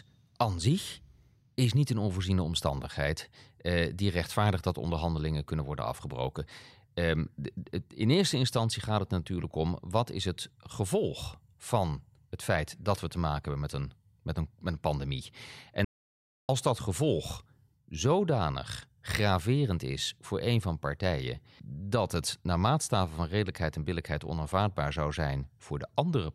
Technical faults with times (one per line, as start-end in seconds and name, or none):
15.85-16.49 audio dropout to silence